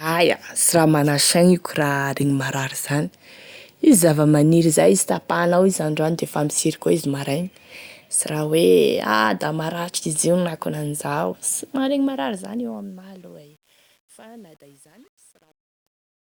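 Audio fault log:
11.63–16.33 s, truncation distortion on a fade: as the speech fades out from around eleven and a half seconds to 16.3 s, the fade stage keeps too few bits and adds no dither, which fits roughly 9-bit resolution. From 12.68 s to the end, the falling level reaches the coarsest steps, so the waveform becomes blocky square stairs. The tail sounds gritty instead of tapering cleanly.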